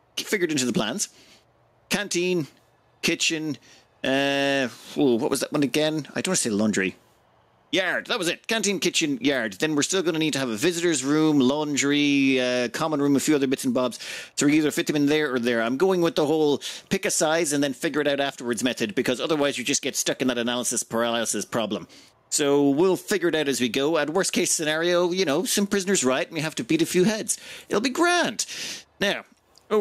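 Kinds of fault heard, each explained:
Gain pumping: the level is pulled down under each loud sound, swinging by around 10 dB, likely from input gain set far too high into a fast limiter. Unlike a noise gate, the level rides up and down rather than cutting out.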